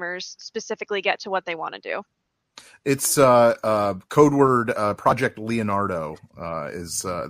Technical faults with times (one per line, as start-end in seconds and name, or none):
none